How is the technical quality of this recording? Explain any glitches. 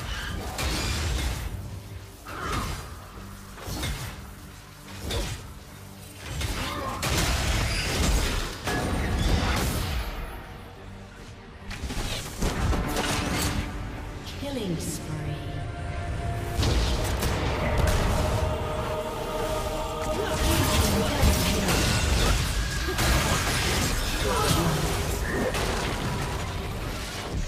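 Nothing here needs explaining, because I don't hear any glitches anywhere in this recording.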